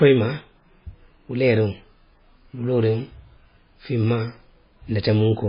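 From start to end the speech carries heavy damage that is likely MP3 compression at a very low bitrate, around 16 kbps. Nothing survives above 5 kHz, so sibilants lose their edge and the sound turns dull and watery, with swirling, chirpy artefacts as weak frequency lines flicker on and off between frames. A spectrogram would show a hard ceiling at 5 kHz and patchy, blocky gaps below it; consonant attacks look smeared in the waveform.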